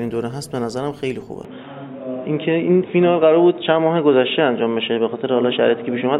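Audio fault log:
1.45 s to end: input switched to a poorer device, likely. Band abruptly stops at 3.8 kHz, level shifts about 5 dB, and faint new background noise appears without a gap, unlike plain filtering.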